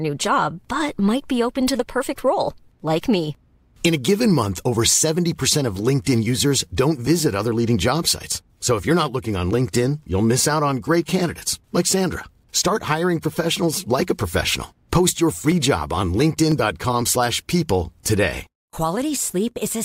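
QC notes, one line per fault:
15.52–19.51 s, periodic USB or driver dropouts: roughly half a millisecond of audio is skipped every 0.50 s, around ten times, as something blocks the USB bus or driver on a fixed schedule. Each skip leaves a regular tick heard only during speech.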